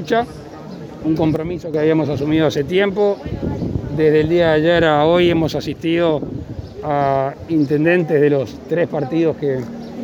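At 1.36 s the level drops abruptly by about 9 dB, the sound and its background noise falling together in a single step with no fade, and at 1.74 s it snaps back up just as suddenly. This is a sudden gain jump: the digital gain was changed from one sample to the next rather than ramped, most likely because a level setting or bit shift was applied instantly and then reversed.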